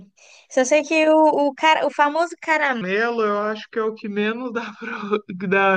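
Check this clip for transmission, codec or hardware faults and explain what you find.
One fault is present. From 2.81 s to the end at 5.76 s, the speech turns deeper and slower, about four semitones lower, with pitch and pace dropping together. This is a section at the wrong speed, running at 0.8 times, likely from playback against a mismatched clock.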